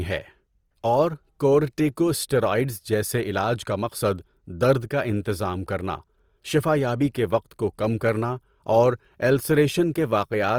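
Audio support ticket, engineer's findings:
Opus compression, throughout: speech grainy and rough, content up to 20.4 kHz. Likely CELT-mode Opus at about 24 kbps, starved bands noise-filled or folded rather than left empty.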